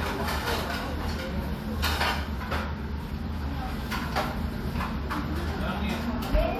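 No technical faults can be heard anywhere in this recording of sounds.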